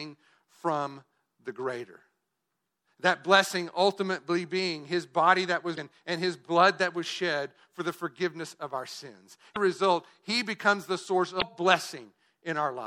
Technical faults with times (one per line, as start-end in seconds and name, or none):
0.00-12.86 MP3 compression
5.74-5.78 damaged data in a compressed stream
9.52-9.57 damaged data in a compressed stream
11.38-11.42 damaged data in a compressed stream